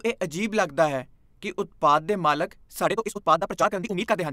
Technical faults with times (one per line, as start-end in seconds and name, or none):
2.83-4.33 time-stretched section